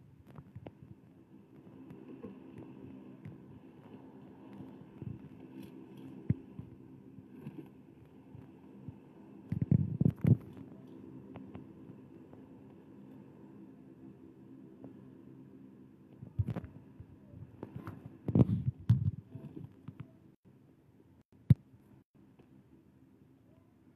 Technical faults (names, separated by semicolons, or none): none